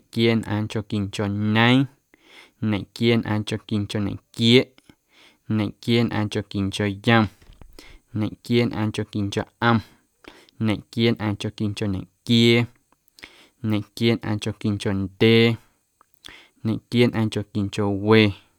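A speech recording with no technical faults. Nothing in the signal needs correcting at any point in the recording.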